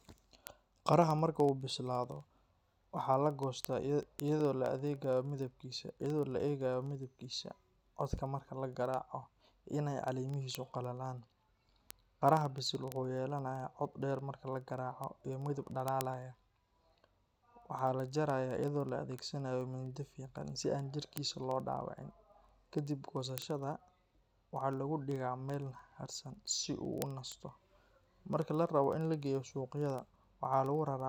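From 0.13 s to 31.04 s, word clock ticks run under the speech. The receiving device is not locked to the sender's clock, which drifts by about 500 ppm. One sample slips about every 40 ms, making hundreds of sharp, uneven ticks at a steady rate.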